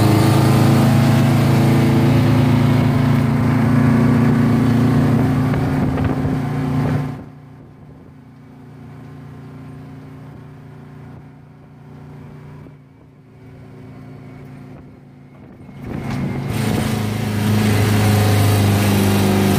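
From 6.92 to 7.34 s the level drops by roughly 20 dB with zipper noise: it comes down in hard 2 dB jumps, around twenty a second, each leaving a tiny click, so you hear a quick ticking. It happens again climbing back up from 15.56 to 16.07 s.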